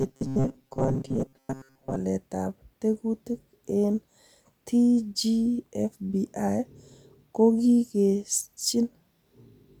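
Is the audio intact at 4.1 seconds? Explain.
Yes, the audio is intact at 4.1 seconds, with no dropout, click or other fault at that moment.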